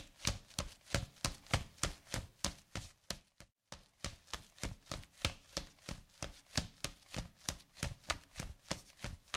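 Nothing here calls for comment, since no technical faults turn up anywhere in this recording of sounds.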